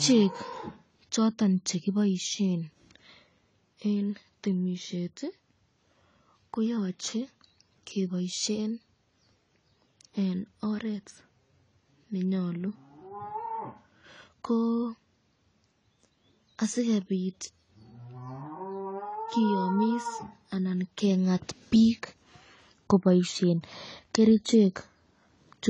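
AAC compression runs through the whole speech clip: nothing reaches above 10 kHz, and the remaining spectrum sounds dull and smeared, with a warbling, fizzy edge on sibilants. This is likely coarse AAC-LC quantisation at a low bitrate, around 24 kbps, starving high bands.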